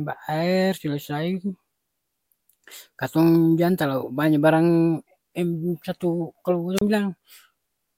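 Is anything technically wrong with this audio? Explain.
Yes. A wireless microphone squelch dropout at 6.76–6.81 s: the FM radio signal faded, the receiver's squelch muted the output, and a brief rise of hiss opens a near-silent hole of about 31 ms before the speech returns.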